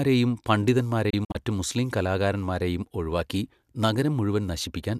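A digital broadcast dropout breaks up the speech between 1.10 and 1.35 s, just before "മുസ്ലീം കലാകാരന്മാരെയും ഒഴിവാക്കി". The receiver stopped getting valid frames and muted whenever a frame was missing or corrupt, so roughly 96 ms of sound is gone, lost in short holes spread across about 240 ms. Each hole fades out over about 8 ms rather than cutting hard, and the longest lasts 48 ms, a pattern that fits about four discarded frames.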